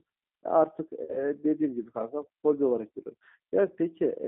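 Throughout, the G.729 codec squeezes the speech into a 300 Hz to 3.6 kHz band with a rough, synthetic edge, which fits an 8 kbit/s rebuild rather than simple band-limiting. From 1.04 to 1.21 s, VoIP packet loss concealed by the speech codec stretches the last sound into a buzzy tone or coloured noise that fades. About 50 ms of audio went missing, and the voice stays weak or distorted afterwards. This sets it apart from a plain dropout, which would leave silence instead.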